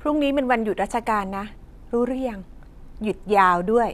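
No technical faults are audible.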